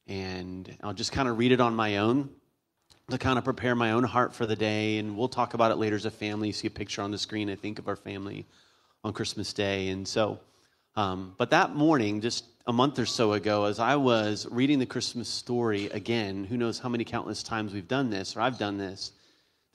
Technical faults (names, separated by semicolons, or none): short concealed packet loss